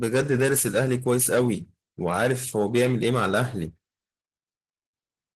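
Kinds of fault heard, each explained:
Opus voice compression: The speech sounds hoarse, muffled and faintly robotic. The lower band is carried by a linear-prediction coder with coarsely coded excitation, and a thin transform layer covers the top. The plainly audible damage points to about 16 kbps in hybrid mode.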